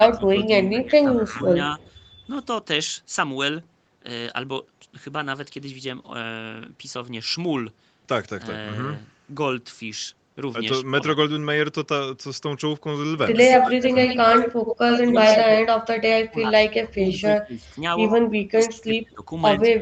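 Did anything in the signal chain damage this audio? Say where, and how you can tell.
Yes. From 0 to 1.51 s the level sags by about 15 dB for roughly a second in total, and from 13.57 s to the end it dips as far as about 30 dB. This is likely speech suppressed in double talk: the call's echo canceller ducks the near talker while the far side speaks.

A delayed, ghostly copy appears at 1.8 to 1.9 s, about 150 ms late and about 35 dB down. From 13.5 to 15.4 s it trails by 80 ms at about full speech level, and at 17.12 s it returns about 20 dB down. This is likely echo leak: loudspeaker pickup the echo canceller failed to remove.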